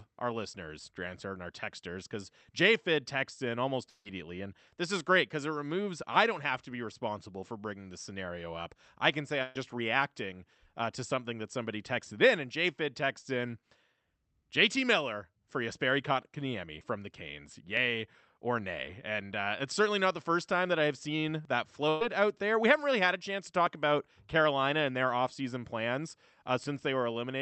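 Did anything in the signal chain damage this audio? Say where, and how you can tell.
Yes. At 3.89 to 4.07 s the network stage likely failed with a long network dropout. The receiver got nothing for about 160 ms, so it extended the last sound it had for roughly 150 ms as a fading buzz or hiss that then drops into about 30 ms of silence. The audio then resumes further along, with that stretch gone.

Two bursts of packet loss, also in the network stage, hit at 9.43 to 9.57 s and 21.89 to 22.03 s. Each removed about 120 ms of audio that never arrived in time to be played. The receiver covered each gap by continuing the preceding sound and turning it down, which is heard as a short held, decaying buzz or hiss with no silence. The audio then picks up past the missing piece, over a call codec path that stops at 8 kHz.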